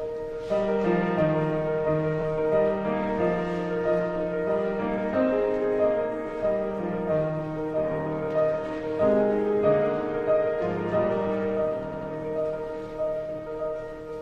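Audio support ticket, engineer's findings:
Repeated frames, 2.20–2.22 s and 11.91–12.10 s. Brief stutter, then a longer double repeat of a 92.9 ms block (played twice more, adding 185.8 ms). The first block is 23.2 ms, consistent with one compressed frame. Likely a duplicated frame run in the encoder or transport path.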